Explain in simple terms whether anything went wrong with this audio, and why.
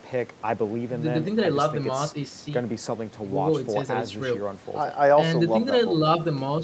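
Nothing went wrong with this speech recording. You can hear faint background noise from the room and a slightly narrowed sound with nothing above 8 kHz, which is simply how the call carries audio.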